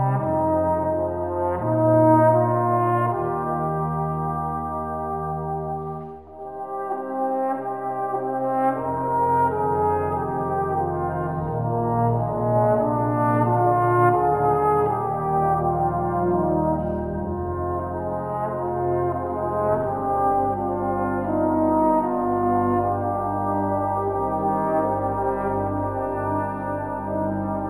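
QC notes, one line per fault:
Throughout, imaging from linear upsampling: dull top end and faint mirrored content from 5.5 to 11 kHz, roughly 45 dB down, which fits a crude 11 kHz-to-48 kHz conversion.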